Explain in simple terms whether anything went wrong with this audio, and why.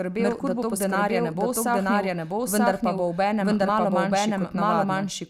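Something did go wrong: this speech has a doubled audio track running the whole way through. A second copy of the same recording plays along about a second behind, at roughly the same loudness, so every phrase comes back as a clean, full repeat rather than a room echo. The likely cause is the sound being picked up twice, once through a slower route, or an edit leaving two copies stacked out of step.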